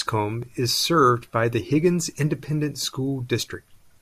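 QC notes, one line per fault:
0.43 s, block of digital silence: a 0.67 ms dropout to zero, consistent with a 32-sample unfilled buffer, heard as a tick or dip just before "is served by the".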